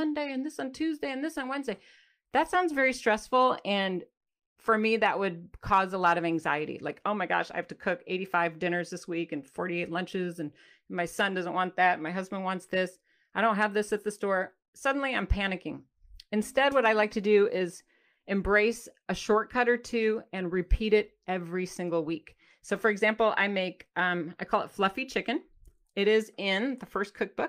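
No technical faults can be heard in the speech. There is no moment in the recording that calls for comment.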